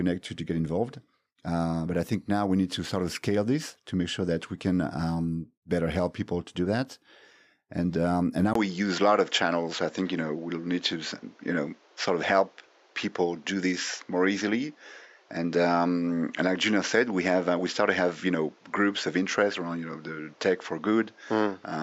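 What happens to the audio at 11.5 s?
An input switch to a poorer device is in effect at 11.5 s, from 8.53 s after "um and" to the end. The likely cause is the input jumping to a narrower-band microphone: nothing above 7.6 kHz remains, so the speech sounds duller and boxier at roughly the same level, over a new faint background noise, following a 20 ms gap at the switch.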